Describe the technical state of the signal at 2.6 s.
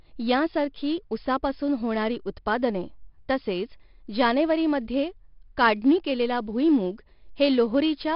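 At 2.6 s the speech carries a gritty hiss that rides on its louder parts, with roughness on sharp onsets and a dull top that stops near 5.3 kHz. This is 4-bit ADPCM compression, present throughout the clip and heavy here. Each sample is coded as a coarse step from a prediction, so the error rises and falls with the level. The bandwidth limit points to a low sample rate of about 11 kHz.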